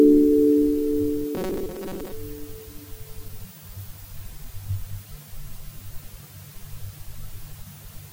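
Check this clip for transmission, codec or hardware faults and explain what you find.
One fault stands out: robotic sound from repeated short buffers, from 1.35 to 2.12 s. The audio becomes a rigid, metallic buzz at 188 Hz, likely caused by late-arriving data being padded by looping a roughly 5.3 ms chunk, with about half the real audio skipped. A spectrogram would show evenly spaced harmonics of 188 Hz, and the waveform would show an identical short cycle repeating.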